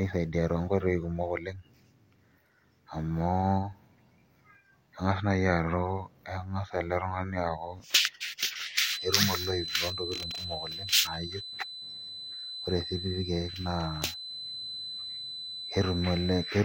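A feedback whistle runs from 8.72 s to the end at 16.65 s: a thin, steady 4 kHz tone sitting about 10 dB below the speech and slowly swelling and fading in level. The likely cause is a loudspeaker-to-microphone loop held just at the edge of feedback.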